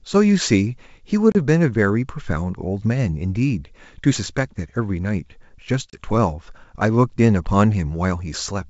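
At 1.32 s and again at 5.90 s, packet loss on the ADPCM call cuts a hard-edged hole of about 30 ms, a few packets' worth. Unlike a plain dropout, the speech resumes slightly distorted because the decoder's predictor has lost step, and it settles within tens of milliseconds.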